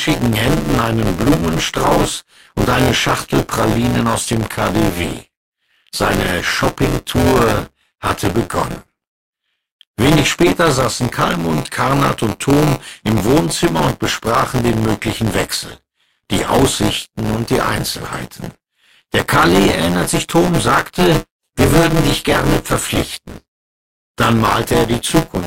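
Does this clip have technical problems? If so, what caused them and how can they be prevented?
Yes. Throughout the clip there is buffer tearing: the software filling the playback ring buffer and the hardware draining it have drifted out of step, so their positions cross partway through every period. About a fifth of each period is stale audio from roughly 20 ms earlier, spliced in with abrupt joins. The result is a steady robotic buzz at 172 Hz, which fits a 256-sample buffer, riding on the speech only while it is sounding. To prevent it, keep the writer safely ahead of the hardware read pointer by tracking its position, using a larger buffer or more periods, and running the audio thread at real-time priority.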